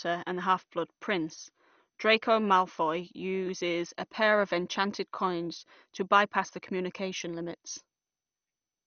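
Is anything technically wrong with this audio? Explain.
Yes. Throughout the speech, nothing reaches above 6.4 kHz, and a gurgling, granular roughness is plainly audible. This is likely MP2 compression at a low rate, one that fits about 48 kbps. It shuts off upper sub-bands and coarsely quantises the rest.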